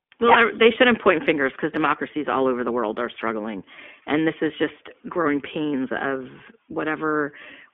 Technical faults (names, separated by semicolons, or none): iLBC codec